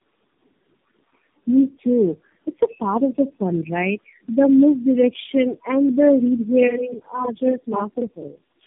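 Speech sounds rough, muffled and warbly throughout, with nothing above 3.8 kHz. This is tandem speech coding: the audio was decoded and re-encoded across several low-rate speech codecs in a row, and each stage compounded the previous stage's damage.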